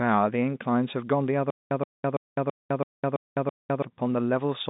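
From 1.50 to 3.82 s, a stutter with silent gaps: a 124 ms burst of speech repeats seven times, each followed by about 208 ms of dead silence, every 332 ms. The likely cause is a stalled stream replaying its last fragment, with the intervening audio lost.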